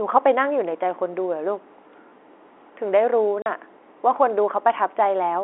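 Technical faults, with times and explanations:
3.42 to 3.46 s, packet loss filled with silence: there's a 40 ms hole where the audio just drops out and comes back. The receiver never got that stretch and played dead air in its place. The gap length fits two lost 20 ms packets. The cut is instant at both ends, sitting over the narrow telephone-band sound of the G.711 line.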